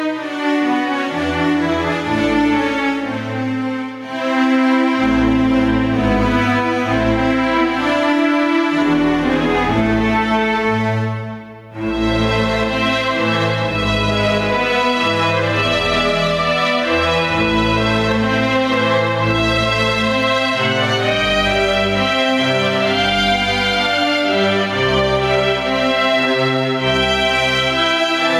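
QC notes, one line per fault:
Throughout, gain pumping. The gain swings by around 10 dB. The level never settles. Loud and quiet passages sit closer together than they should, so the whole clip sounds squashed and breathless. The likely cause is input gain set far too high for the microphone, with a fast limiter or compressor clamping down on each peak and releasing straight after.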